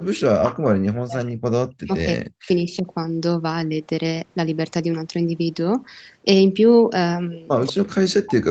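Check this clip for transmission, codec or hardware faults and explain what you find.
Two kinds of fault are present: repeated speech suppression during double talk, and a short echo leak near the end.

Speech suppressed in double talk, at 0.04–0.73 s, 1.05–2.49 s, 2.65–2.87 s and 7.68–8.50 s: the echo canceller, likely confused by both sides talking at once, turns down its own talker along with the echo. The speech dips by about 40 dB, and only about 10 dB at 2.65 s.

Echo leak, at 7.66–7.72 s: the far end's echo canceller likely failed to remove all of the loudspeaker sound reaching its microphone, so some was sent back. A brief copy of the speech returns 181 ms late, about 15 dB below the direct speech.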